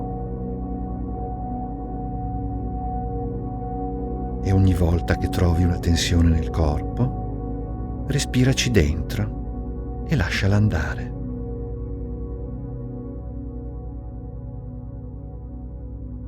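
An adaptive stream starting at a low bitrate is at fault here: the player opened on a cheap rendition, consistent with roughly 12 kbit/s Opus, then stepped up to something near 64 kbit/s at 2.0 s. Until then the audio lacks treble and carries stronger codec artefacts, before clearing abruptly without any gap.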